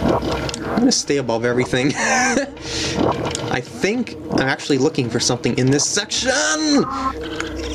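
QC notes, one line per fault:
Throughout, gain pumping. The level swing is roughly 15 dB. The cause is likely input gain set far too high, with a fast limiter or compressor clamping down whenever a peak arrives and releasing once it passes. Loud and quiet passages end up pressed close together in level. The whole sound feels squashed and restless.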